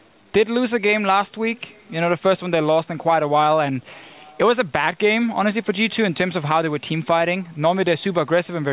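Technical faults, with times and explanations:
The audio comes through a telephone-style call path whose content stops at about 4 kHz, a band limit consistent with G.711 A-law coding, and no technical fault can be heard in it.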